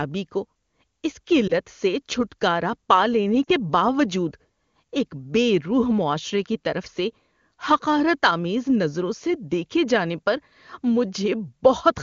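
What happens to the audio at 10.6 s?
At 10.6 s the speech carries on intact, with the AMR wideband (HD Voice) coding at its top rate leaving no audible fault at that moment.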